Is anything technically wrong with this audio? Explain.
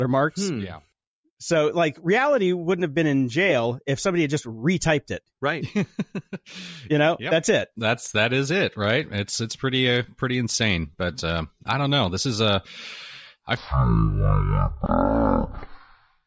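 Yes. From 13.57 s to the end at 16.27 s, the speech has a wrong sample rate fault. Audio captured at 44.1 kHz is being played back at 16 kHz without conversion. That runs it at about 0.36 times speed and drops the pitch by about 17.6 semitones. Just after the change begins, "for uh for" comes out deep and dragging. Speed and pitch fall together by the same ratio, and that is what separates this from a time-stretch or a pitch-shift, which alter only one of the two.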